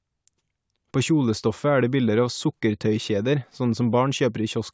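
Nothing technical goes wrong anywhere in this short speech recording, which stays continuous from its first moment to its last.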